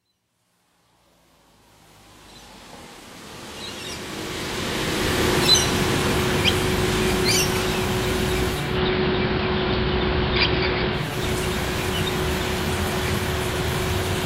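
From 8.47 to 11.25 s, digital radio blends to analogue. The receiver loses digital and cross-fades in 338 ms to AM, adding faint hiss.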